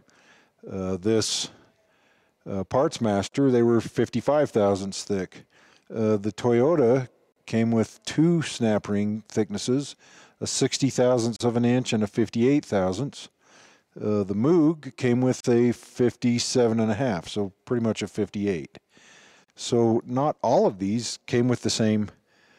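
At 3.29, 7.32, 11.36, 15.40 and 19.44 seconds, the sound drops out briefly and then resumes where it stopped. Each dropout is a gap at a join of encoded pieces. The first lasts about 38 ms; the rest about 40 ms. They recur every 4 seconds. The audio was encoded in separate chunks and butted together untrimmed. Encoder start-up silence and end-of-stream padding remain at each seam. The edges are smeared by the codec.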